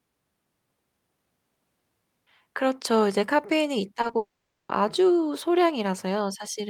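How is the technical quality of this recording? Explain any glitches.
The recording has two connected kinds of glitch around four seconds, both network faults.

Short concealed packet loss occurs at 4.01–4.05, 4.07–4.11 and 4.11–4.15 s. About 20 ms of audio goes missing each time. The receiver extends the last speech sound to patch each gap. You hear brief smears or wobbles.

A long network dropout follows at 4.17–4.71 s. It is likely a network outage. About 0.52 s of speech never arrives. The concealment buzzes or hisses and fades, then about 0.34 s of silence remains. The speech resumes with the lost part simply gone.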